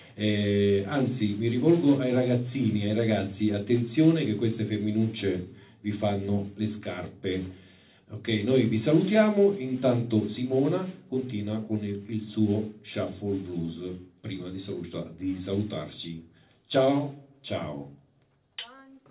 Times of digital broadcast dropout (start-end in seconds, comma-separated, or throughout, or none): none